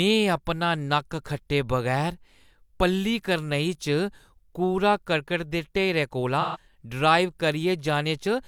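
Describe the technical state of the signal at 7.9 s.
At 7.9 s the speech signal is intact, with no fault audible at that moment.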